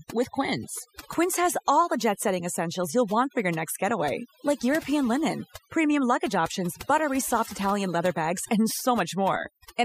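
From start to finish the speech shows overdone noise removal: the noise reducer was pushed too hard, so bands sitting near its noise estimate get switched off, quiet voice detail included. The gaps fall to near silence with twinkly specks.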